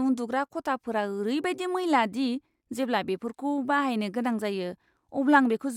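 No technical faults can be heard anywhere in the speech, and the signal stays steady and intact throughout.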